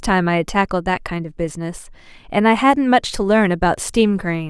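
A speech clip, and from about 2.51 s to the end it picks up sample clock jitter: the converter's timing wobbles by something like a microsecond or two, so each sample lands a touch off. That puts a gritty hiss roughly 40 dB under the speech, worst on loud, bright sounds and gone in the pauses.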